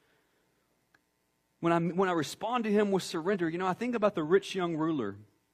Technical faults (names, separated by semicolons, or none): compressed frames skipped